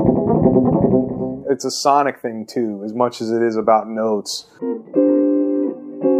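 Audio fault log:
No fault is heard in this audio.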